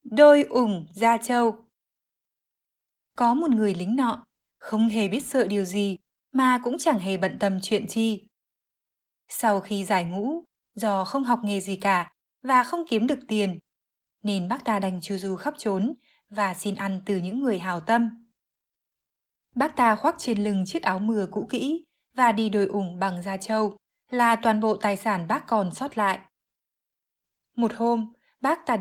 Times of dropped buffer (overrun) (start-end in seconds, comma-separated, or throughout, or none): none